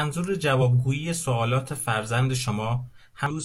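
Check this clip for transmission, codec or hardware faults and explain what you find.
Two brief faults appear in the speech, both damaged data in a compressed stream. They occur at 0.58 to 0.62 s and at 3.26 to 3.31 s. Corrupted bytes make the decoder misread frames and lose sync. Each is heard as a short glitch.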